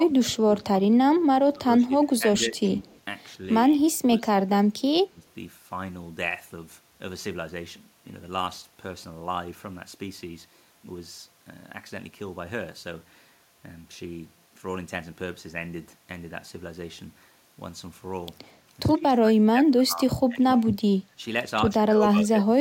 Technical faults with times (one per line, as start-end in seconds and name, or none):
0.00-2.86 speech suppressed in double talk
2.86-3.00 echo leak
3.69-5.26 speech suppressed in double talk
18.92-20.66 speech suppressed in double talk
21.01-21.22 speech suppressed in double talk
21.76-22.60 speech suppressed in double talk